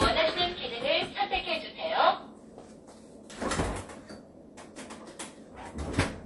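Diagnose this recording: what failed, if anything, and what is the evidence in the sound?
Codec stage: the whole clip stops dead at 11.3 kHz with plainly audible watery smearing, which fits MP3 compression at around 48 kbps, likely bit-starved.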